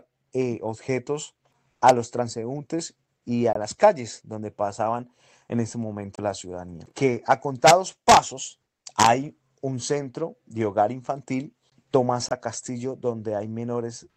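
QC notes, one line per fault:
3.53–3.57 s, 6.16–6.19 s, 12.29–12.33 s: corrupt frame muted. Three abrupt dropouts to silence, about 44, 36 and 40 ms long. Bit errors left compressed frames undecodable, so the player muted one or two frame lengths each time, keeping timing intact.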